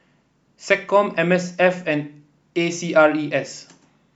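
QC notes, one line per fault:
No audible faults found in this speech recording.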